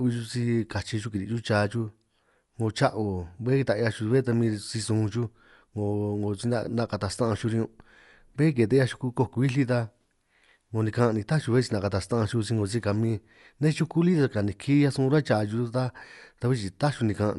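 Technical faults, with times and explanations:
Throughout, Dolby Digital compression: nothing above about 11.5 kHz and rough, fluttering noise around the speech, likely from encoding near 64 kbps, with unfunded frequency lines filled by dither.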